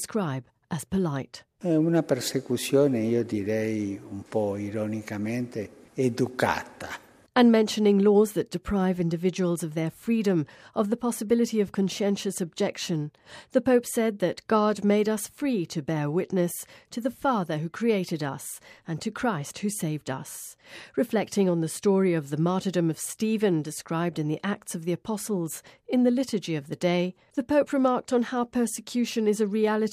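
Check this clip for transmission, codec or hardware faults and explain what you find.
No transmission, codec or hardware fault can be heard anywhere in the clip; the signal holds steady throughout.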